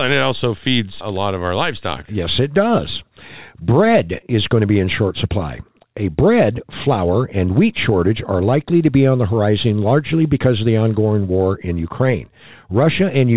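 No technical faults are audible.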